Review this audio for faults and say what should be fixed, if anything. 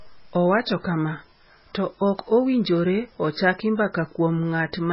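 Throughout the speech the sound is watery and swirly, with chirpy s sounds, smeared onsets, and nothing above 5.6 kHz. This is likely heavy MP3 compression, with a damage level that points to a bitrate around 16 kbps. Starved of bits, the encoder discards the treble and lets weak frequency lines flicker on and off between frames. To prevent it, encode at a much higher bitrate or keep a lossless copy.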